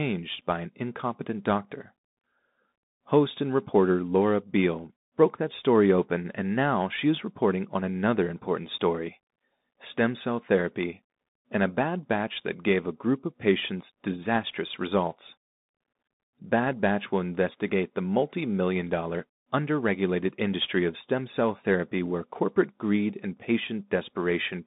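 Throughout, the speech carries Bluetooth CVSD headset codec damage. This one-bit delta coder's adaptive step lags behind loud high content, so s sounds turn scratchy over a granular hiss. A spectrogram shows energy confined to 150 Hz–3.7 kHz and empty above 3.8 kHz.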